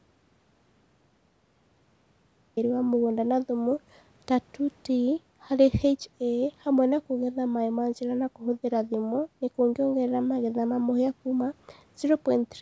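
Speech that opens in silence, with not even room tone, until the sound comes in abruptly at 2.57 s. That is an audio dropout to silence, already under way when the clip begins, most likely from a lost input while the recorder kept writing silence. The speech passes through call microphone processing, with nothing above 8 kHz.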